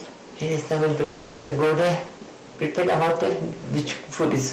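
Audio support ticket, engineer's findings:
Hard clipping throughout. Peaks flattened on every loud syllable, harsh fuzz on speech. Input driven about 15 dB past full scale, around a tenth of samples cut flat. Likely gain staging before converter or fixed-point stage; flat tops add high harmonics.

Call audio freeze, 1.03 to 1.53 s. Speech stalls into a fading buzz or hiss continuation for 0.48 s, never fully silent, then resumes where it stopped, nothing lost. Likely jitter buffer underrun from delayed packets; playout delay now 0.48 s longer.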